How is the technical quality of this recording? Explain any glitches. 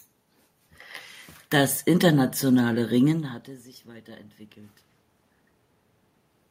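Nothing stood out as a technical problem on listening to this speech recording.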